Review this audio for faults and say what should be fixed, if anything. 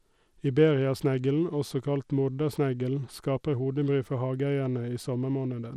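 Throughout the speech, the treble is dulled and flickering, with a gritty edge and nothing above 16.9 kHz, likely Bluetooth SBC compression at a small bit pool, which fits roughly 96 kbps. Starved upper sub-bands lose bits, and the rest are coarsely quantised. A spectrogram shows a hard ceiling and patchy high bands. Record over a wired connection, or use a higher-quality codec or bit pool.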